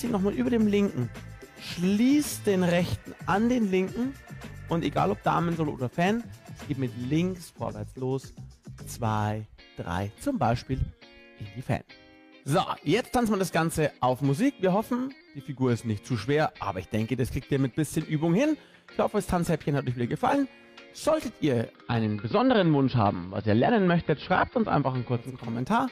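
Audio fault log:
21.61–25.59 s, digital radio blending to analogue. The receiver lost its digital stream and cross-faded over about 474 ms to the AM broadcast of the same station, then returned. During the AM stretch the top end is gone, so the sound turns dull and narrow. A faint hiss rises, sitting roughly 40 dB below the signal. The level also shifts by about 2 dB at the switch.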